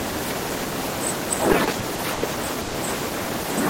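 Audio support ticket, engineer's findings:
Repeated stalls (stutter), 1.48–2.23 s: seven gaps, about 210 ms filled, longest 90 ms, nothing lost. Jitter buffer repeatedly running dry on late packets; last sound extended each time.

Call audio freeze, 2.61–2.75 s: 130 ms hold with no silence, sound resumes where it stopped. Likely jitter buffer underrun from delayed packets, concealed by continuing the last sound.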